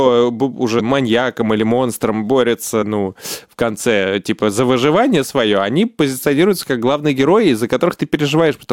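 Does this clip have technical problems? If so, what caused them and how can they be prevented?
Yes. Damaged data in a compressed stream causes brief blips at 0.79 s, before "маньяком или монстром", and 2.81 s, before "ну в конце типа". Corrupted bytes make the decoder misread frames and resync. Checksummed, reliable transfer prevents it.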